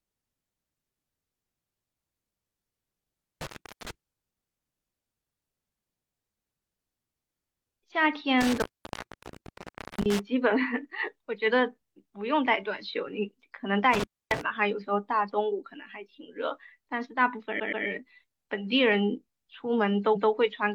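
Intermittent contact cuts the speech at 3.41 to 3.91 s, 8.41 to 10.19 s and 13.93 to 14.41 s. A loose connection opens for about 385 ms, 1.36 s and 274 ms. Crackle marks each break. Repeated frames then stutter the speech. At 17.56 s a 128 ms block plays twice more, adding 256 ms. At 20.12 s a 170.7 ms block repeats once.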